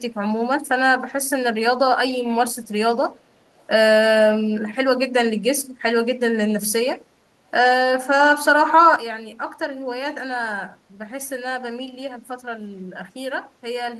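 At 3.58 to 3.65 s a brief echo leak appears: a very faint, delayed copy of the speech about 352 ms behind, likely a far-end echo canceller missing loudspeaker pickup, unlike reverb's smooth tail. At 8.96 s a sudden gain jump drops everything by about 10 dB until the end, speech and background noise together in one step, not a gradual fade.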